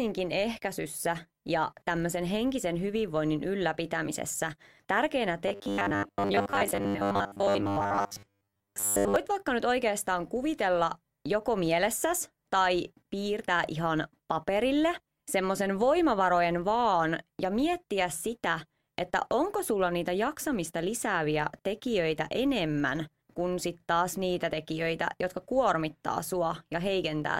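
A speech clip whose filter restarts on every block: it loses its state at each block boundary and begins again from silence, so each block opens with a small transient. Throughout, this produces a steady 100 Hz buzz that rises and falls with the speech level, which fits blocks about 10 ms long. From 5.48 to 9.16 s the speech turns into a rigid, metallic drone pinned at 100 Hz that only loosely tracks the syllables. This is likely robotic sound from repeated short buffers: audio arriving too seldom, with the last 10 ms or so looped to fill the gaps while most of the real audio in that stretch is dropped.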